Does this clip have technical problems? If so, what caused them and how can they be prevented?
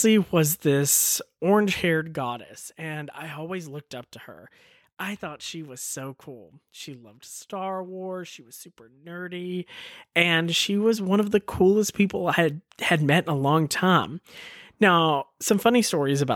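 Yes. Right after "she was super", from 9.39 to 9.85 s, a fine ticking or zipping rides on the speech until "and she was one". This is zipper noise. A level change of roughly 15 dB was applied as a staircase of small jumps, around a hundred per second, with no smoothing between them, so each jump leaves a tiny click in the waveform. It can be prevented by ramping gain changes smoothly, sample by sample, instead of updating them once per block.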